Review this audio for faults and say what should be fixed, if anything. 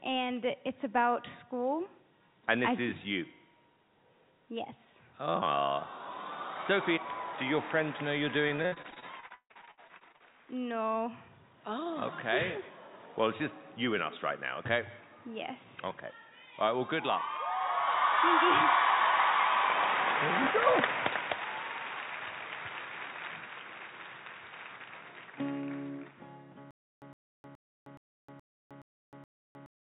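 From 8.48 to 10.34 s the sound turns choppy and robotic, with missing pieces. This is repeated packet loss: 22 holes, the longest about 156 ms, were patched by stretching the previous sound, so roughly 40% of that stretch is filler. A larger, adaptive jitter buffer on a steadier network path, with forward error correction, would prevent this.

From 26.71 s to the end, a 110 ms burst keeps returning every 0.42 s, seven times, with about 0.31 s of dead digital silence between repeats. This is a stutter with silent gaps. The likely cause is a stalled player or stream that replays its last fragment on each retry and then runs empty. Buffering more before playback and recovering from stalls without replaying stale audio would prevent this.

The call path itself, band-limited to 4 kHz as its G.711 A-law codec requires, is not a fault.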